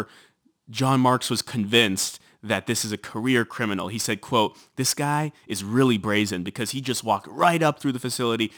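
Crude rate conversion runs throughout, consistent with repeating samples to go from 44.1 kHz to 48 kHz. A gritty fizz, roughly 20 dB below, trails the speech.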